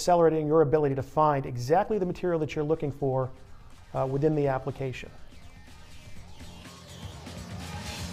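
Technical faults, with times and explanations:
0.76 to 1.96 s: GSM signalling bursts. A nearby 2G phone is signalling. The audio circuit rectifies its radio bursts into galloping ticks and 217 Hz buzzes, roughly 30 dB below the sound.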